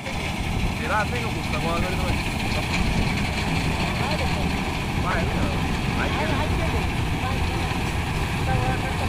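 Damaged data in a compressed stream occurs twice, at 0.72 s and again from 5.11 to 5.18 s. Each time, some bytes of the encoded stream were corrupted, so the decoder misread the affected frames, lost its place in the bitstream and had to hunt for the next valid frame header before playback could continue. The first event is a brief blip, and the second is a longer disturbance lasting about 70 ms.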